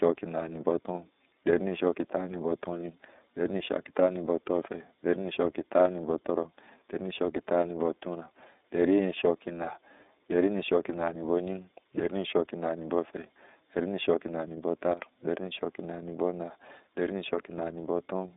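From start to finish the speech sounds thin and boxed-in, with a slightly rough, synthetic edge on every syllable and nothing heard above about 3.8 kHz. This is the iLBC codec at work. It passes only a telephone band of roughly 250 Hz to 3.7 kHz and rebuilds each 30 ms frame's excitation independently of the frame before, which fits its 13.33 kbps mode. That frame-by-frame coding is what leaves the plainly audible graininess.

At 14.93 s the level drops abruptly by about 10 dB, speech and background noise together, and comes back at 15.02 s, a dip of under a tenth of a second with hard edges rather than a fade. This is a sudden gain jump, likely caused by a digital gain setting being changed from one sample to the next with no ramp, so the level steps instead of sliding.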